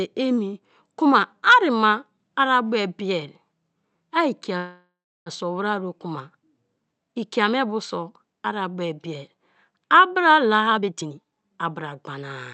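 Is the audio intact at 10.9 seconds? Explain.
No, 10.9 s falls inside a jitter buffer speed-up running from about 10.66 to 11.71 s. The receiver had piled up too much audio, so it kept snipping out pitch-period-sized chunks, roughly half a second in total. The speech rushes ahead at about 145% speed while the pitch stays put.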